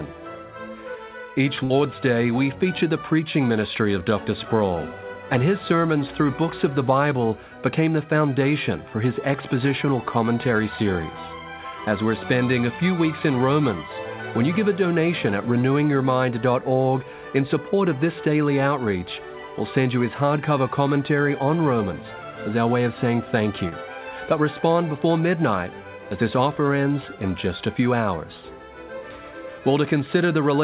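Right at the start, from 1.64 to 1.73 s, there's a burst of packet loss. A short run of packets never arrived in time, so the receiver kept the last bit of sound going for about 58 ms and faded it down. You hear that as a held buzz or hiss that sags away. When the real audio comes back it has jumped ahead, and about 60 ms of the sound in between is simply gone.

Much later, at 23.69 to 23.75 s, there's a short concealed packet loss. About 30 ms never reached the decoder, and roughly 27 ms of that was papered over by extending the preceding sound and then blending back into the real signal. It sounds like a brief smear or wobble rather than a clear gap, with that sliver of sound lost underneath. All of this sits inside a G.711 mu-law call path that stops at 4 kHz, which fits its usual 64 kbps rate.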